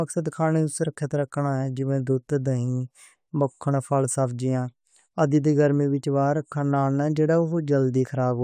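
No technical faults are audible anywhere in the speech recording.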